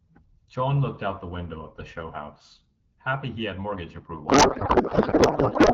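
Codec payload misread from 4.27 s to the end: octet-aligned AMR-WB frames are being parsed as bandwidth-efficient, so every field lands in the wrong bits. The speech, clear before this and consistent with 12.65 kbit/s HD Voice, collapses into garbled, warbling noise that barely tracks it.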